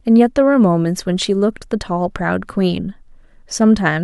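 No technical faults can be heard anywhere in the speech recording. No event stands out at any point, so there are no times to mark.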